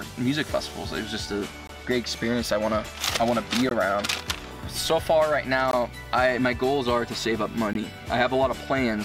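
At 1.67, 3.69, 5.71 and 7.73 s the audio drops out for 20 ms each time, a gap between chunks. The sound appears to be joined from 2 s chunks, with a short stretch of silence inserted at every join, so the holes recur about every 2.02 s. Nothing is lost from the program itself; it simply stops and restarts. Each gap is heard as a brief hole or dip at a regular interval.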